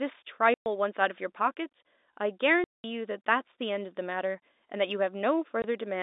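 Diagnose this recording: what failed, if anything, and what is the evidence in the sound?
Packet loss filled with silence, a network fault: the speech drops to dead silence at 0.54–0.66 s, 2.64–2.84 s and 5.62 s. All three holes (120, 200 and 20 ms) are multiples of 20 ms, which fits lost 20 ms packets rather than a buffer underrun's irregular gaps. The holes have hard edges.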